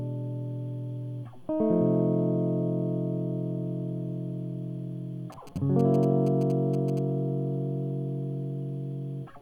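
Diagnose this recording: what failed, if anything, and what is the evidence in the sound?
GSM signalling bursts, 5.32–6.99 s: analogue wiring rectifies phone pulses into galloping 217 Hz buzzes, seen as clustered vertical spectrogram striations.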